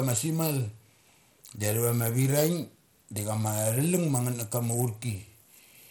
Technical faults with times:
0.00-5.91 Bluetooth SBC compression

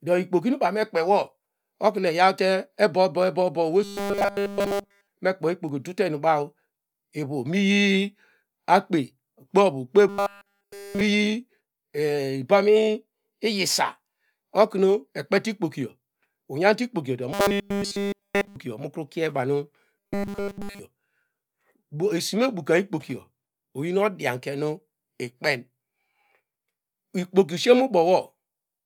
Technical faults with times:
3.84-5.11 robotic sound from repeated short buffers
10.09-11.01 robotic sound from repeated short buffers
17.32-18.56 robotic sound from repeated short buffers
19.97-20.80 robotic sound from repeated short buffers

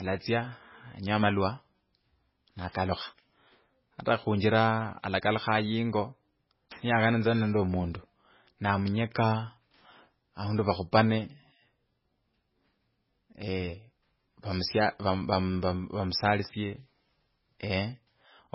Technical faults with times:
0.00-18.55 MP3 compression

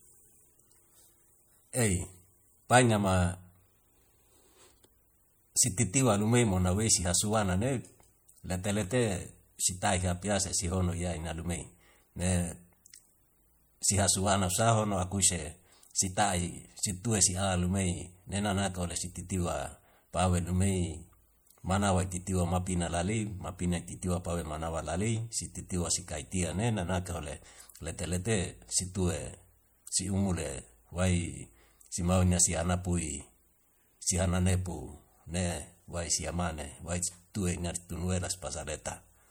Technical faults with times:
0.00-39.30 MP3 compression

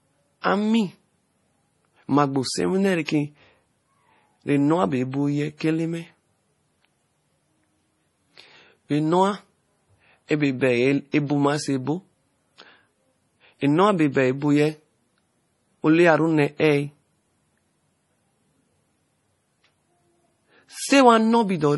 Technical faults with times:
0.00-21.77 MP3 compression
0.41-0.44 pre-echo
3.05-3.08 pre-echo
11.12-11.14 pre-echo

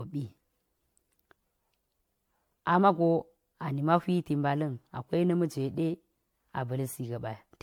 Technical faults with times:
0.00-7.63 generation loss

